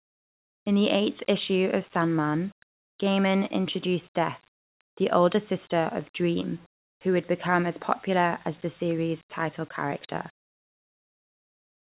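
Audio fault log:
Nothing in the speech stood out as a fault on listening.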